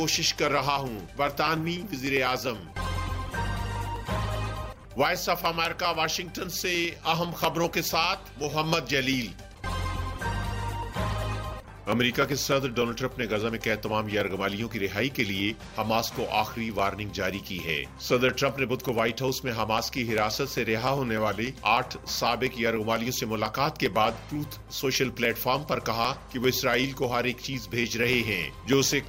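From 0.08 s to 29.03 s, something keeps interrupting the USB link or audio driver at a steady interval of 0.0995 s, about ten times a second. Each interruption drops roughly half a millisecond of audio, which is skipped outright rather than replaced with silence, so the waveform jumps at every gap. These periodic USB or driver dropouts, around three hundred in all, come through as an even, rapid train of ticks that sound only where the signal is present.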